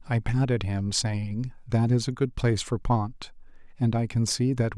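No technical faults are audible.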